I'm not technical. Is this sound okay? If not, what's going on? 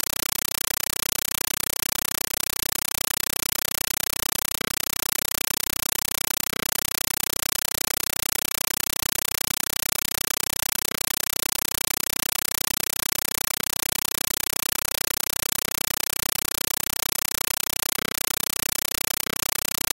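No. For the whole clip, the speech is replaced by loud, chattering static. This is a compressed stream played as audio: a Dolby Digital (AC-3) signal reached the player without being decoded, so its packed data was treated as ordinary sound. Each data block comes out as a short burst of noise, about 8 ms long, followed by silence, repeating about 31 times a second. That steady repetition is the rapid chatter you hear.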